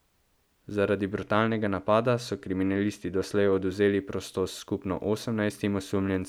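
From 1.13 to 3.71 s, channel delay causes comb filtering. One channel lags about a sample. Mono summing cancels near 20 kHz, dulling the top.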